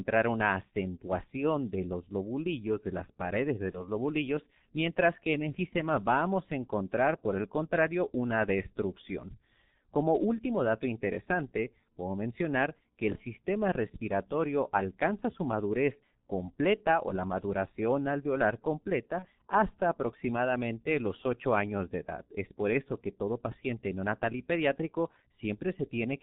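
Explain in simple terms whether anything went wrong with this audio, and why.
G.723.1 codec damage, heard across the whole recording: the speech went through an old internet-phone codec that squeezes sound into very little data. It cuts off everything above about 4 kHz and rebuilds the voice from a rough model updated in 30 ms chunks. That makes the speech muffled and hoarse here, with consonants smeared together, and the damage is heavy.

VoIP packet loss concealed by the speech codec, at 3.71 to 3.85 s, 5.69 to 5.74 s and 19.19 to 19.27 s: each brief gap fits one missing 30 ms chunk of data. The decoder filled each hole by guessing from the sound just before it. That brief guess comes out as a buzzy or noisy smear that fades. Because each chunk builds on the previous one, the voice stays weak or warped a little past the gap.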